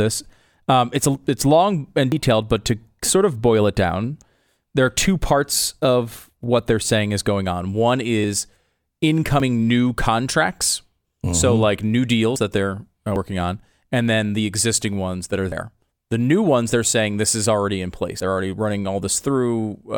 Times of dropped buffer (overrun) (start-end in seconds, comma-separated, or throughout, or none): 2.12, 9.40, 12.36, 13.16, 15.52, 18.20